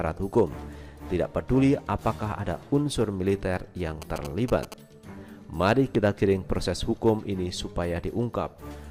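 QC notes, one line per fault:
4.02–4.74 s, GSM signalling bursts: a nearby 2G phone's short groups of radio bursts were rectified by the audio circuit, so a galloping dit-dit-dit of 217 Hz buzzes sits roughly 10 dB below the sound for this stretch.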